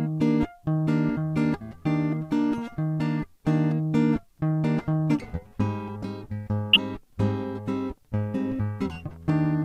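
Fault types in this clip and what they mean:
Corrupt frame decoded: damaged compressed frames were decoded anyway, throwing energy onto wrong frequencies. This music has two blips, near 6.73 s and 9.06 s, each a couple of frames long. They show as short vertical smears on a spectrogram, the first spiking near full scale, the second much quieter.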